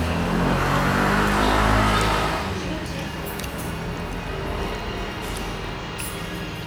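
No audible technical faults at any point in the recording.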